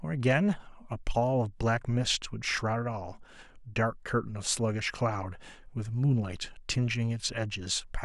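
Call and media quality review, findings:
No audible faults found.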